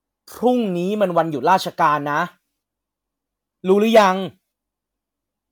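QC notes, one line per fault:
No faults heard.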